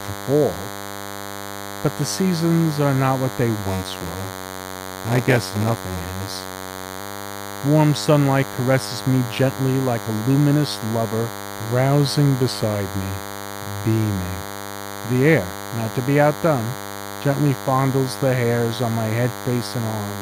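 Running under the whole recording is a thin, steady 100 Hz buzz with a stack of harmonics: DECT cordless phone buzz. A DECT handset or base station nearby sends a radio burst every 10 ms, and something in the audio path rectifies it into the signal, where it sits fairly high, not far below the wanted sound. Between 3.62 and 7.00 s there's a second problem, a block size mismatch (padded). One stage writes blocks a bit shorter than the next stage reads, and the leftover space is zero-filled, so every block gets a tiny gap. That produces a separate buzz at about 93.8 Hz, the block rate, and the audio runs at 0.938 times normal speed while keeping roughly its normal pitch. That ratio fits a 512-sample read against a write of about 480 samples.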